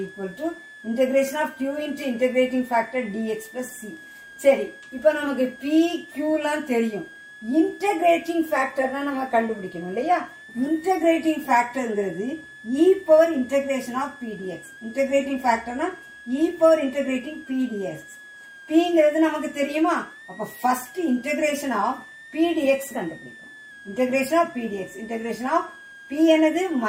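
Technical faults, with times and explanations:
Throughout, switching supply whistle: a high whistle sits about 20 dB below the sound, its pitch wandering between roughly 1.6 and 2 kHz. A power supply switching in an audible burst mode leaks its regulation frequency into the audio, and the pitch shifts as the load varies.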